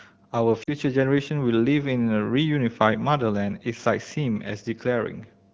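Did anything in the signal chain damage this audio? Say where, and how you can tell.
Yes. Lost AMR speech frames on the radio link at 0.63 to 0.73 s. The decoder repeats the last pitch with falling gain, so on a spectrogram the harmonics smear flat and fade.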